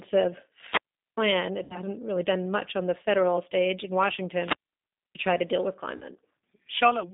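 Throughout, the speech carries G.729 codec damage: band-limited to roughly 200 Hz to 3.7 kHz at 8 kbit/s, with a rough, synthetic buzz rather than the clean dullness of plain filtering.

From 0.66 to 1.17 s a wireless microphone squelch dropout occurs: rising hiss as the radio link fades, then about 0.4 s of near silence. That true hole separates it from codec concealment.

At 1.64 to 1.80 s, just before "really done much on", VoIP packet loss concealed by the speech codec stretches the sound into a fading buzzy tone or coloured noise over about 60 ms, which fits three lost 20 ms packets. The gap is filled, not silent.

A second squelch dropout runs from 4.37 to 5.20 s, between "the federal stage in" and "try to deal with", muting for about 0.62 s.

Right after "try to deal with", from 5.97 to 6.04 s, concealment covers about 40 ms, consistent with two lost packets. The voice is briefly weak or distorted before recovering.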